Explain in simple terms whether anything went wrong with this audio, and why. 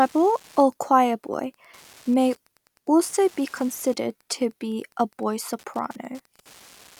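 Wi-Fi interference runs through the whole clip: faint ticking every 102.4 ms, about ten a second, as the circuit picks up a nearby Wi-Fi beacon.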